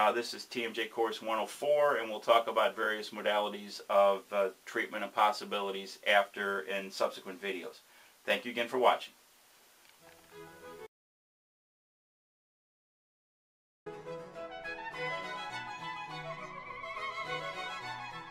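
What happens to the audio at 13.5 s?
At 13.5 s the clip is inside an audio dropout to silence running from 10.87 to 13.86 s. The input was most likely lost, so the recorder kept writing silence: the sound cuts off abruptly, leaving about 3.0 s of dead silence with no room tone, then resumes mid-flow.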